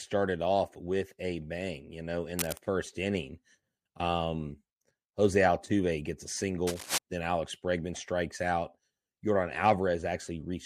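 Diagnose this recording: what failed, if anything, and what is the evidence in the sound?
Cable scratch noise, in the analogue wiring. Dense, uneven bursts of scratching cover the speech from 2.37 to 2.58 s and 6.67 to 6.98 s, only a little quieter than it. A worn cable or connector was likely moved. Its contact resistance flickered, injecting noise.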